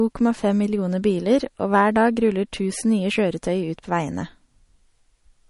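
Likely MP3 compression at a low bitrate, consistent with roughly 40 kbps, runs through the whole speech clip. With so few bits available, the encoder discards weaker frequency components, which flicker in and out from one frame to the next, and nothing is left above 11.1 kHz. The damage is plainly audible: the speech takes on a watery, swirling texture, its treble ends abruptly at that cut-off, and sharp onsets lose their definition.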